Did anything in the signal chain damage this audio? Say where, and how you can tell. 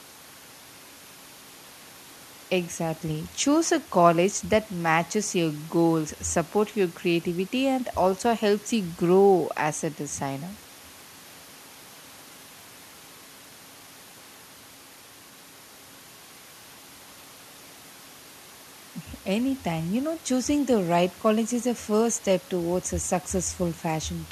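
No, nothing in the signal chain damaged this speech recording. Listening from the analogue side through conversion, processing, transmission and playback, no stage leaves an audible mark.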